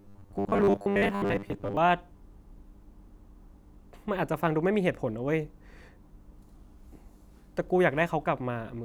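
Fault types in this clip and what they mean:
Robotic sound from repeated short buffers: from 0.01 to 1.77 s the speech takes on a rigid, metallic buzz fixed at 100 Hz that only loosely tracks the syllables. The likely cause is audio arriving too slowly, so the playback side keeps repeating its last short block instead of the true signal. A 100 Hz buzz fits a block of about 10 ms, repeated for roughly two thirds of that stretch.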